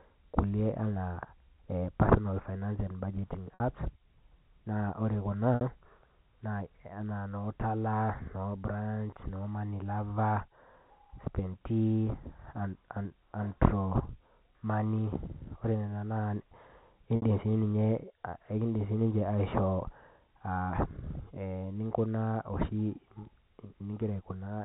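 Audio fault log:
3.54 s, 5.55 s and 17.16 s: packet loss with pitch repetition. Each gap lasts 60 ms, which fits two lost packets. The receiver repeats the last pitch period to fill it, so the sound briefly holds with a buzzy tone, then fades.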